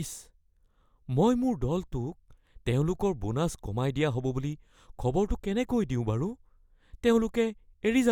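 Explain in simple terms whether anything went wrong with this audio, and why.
Nothing went wrong with this recording of speech that a listener can pick out. No dropouts, glitches or other technical faults turn up anywhere in it.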